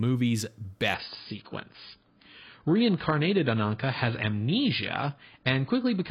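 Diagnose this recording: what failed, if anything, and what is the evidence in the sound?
Network-driven adaptive stream at a lower bitrate: at 0.94 s the speech abruptly loses everything above 5.1 kHz, with no gap. The spectrogram shows a flat ceiling from then on, which fits a switch to a much lower-bitrate AAC rendition.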